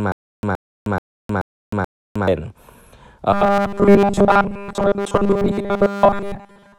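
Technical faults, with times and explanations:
0.00–2.28 s, stutter with silent gaps: a 0.12 s burst repeats five times, every 0.43 s, with 0.31 s of digital silence between, likely from a stalled stream replaying its last fragment.
3.33–6.79 s, robotic sound from repeated short buffers: a rigid metallic buzz at 200 Hz covers nearly all the sound, likely from a repeated 5 ms buffer replacing skipped audio.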